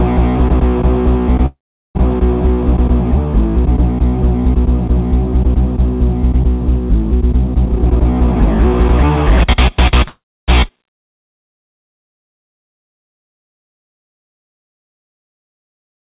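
From 1.46 to 1.97 s a call audio freeze occurs, likely because packets stalled in transit and the jitter buffer ran dry. The receiver stretches the last sound into a fading buzz or hiss, then about 0.4 s of silence, before playback resumes where it stopped, inserting roughly half a second of delay.

From 7.65 to 10.04 s the jitter buffer speed-up follows a backlog. The receiver trims short pitch-period pieces again and again, removing about 0.4 s in total. The audio plays at about 118% speed with unchanged pitch and sounds hurried.

From 10.08 to 10.50 s a second call audio freeze occurs. The last sound fades into about 0.3 s of silence, and playback then continues from the same point, adding roughly 0.4 s of delay with nothing lost.

At 10.68 to 10.71 s a skip ahead discards about a third of a second of audio while later audio was already waiting. Playback jumps forward across a gap of only about 8 ms, so the two sides are joined almost directly.

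Throughout, nothing is heard above 4 kHz, which fits the 64 kbps G.711 mu-law call path.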